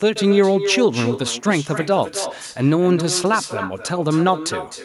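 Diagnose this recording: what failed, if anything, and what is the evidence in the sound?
Echo with no canceller, throughout: a call-processing failure. Every phrase returns around 300 ms later, about 11 dB quieter and thinner, as the far loudspeaker feeds the microphone unremoved.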